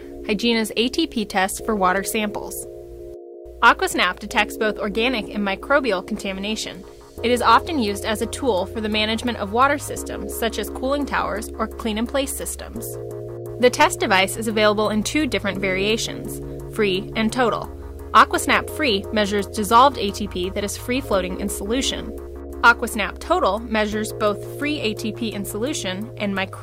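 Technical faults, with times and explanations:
3.65–4.41 s, 7.48–7.56 s, 13.81–14.20 s, 18.16–18.57 s and 19.76–19.87 s: hard clipping. Peaks exceeded what a stage could pass by about 1 to 5 dB, so their tops were sliced flat. The squared-off waveform adds high harmonics, heard as crackle, harshest in the two bursts overdriven by about 5 dB, at 13.81 s and 18.16 s.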